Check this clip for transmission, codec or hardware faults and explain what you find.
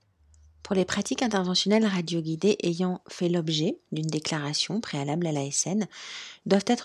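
No technical fault can be heard in the speech, and the signal stays continuous and stable throughout.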